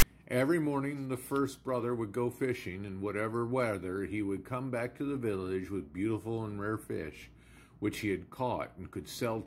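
At 0.00 s a short burst of file tags played as audio: text metadata read as samples gives a loud, hard-edged rasp offset to one side, lasting 24 ms.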